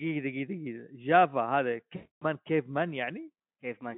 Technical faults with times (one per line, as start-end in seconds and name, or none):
1.95-2.25 VoIP packet loss concealed by the speech codec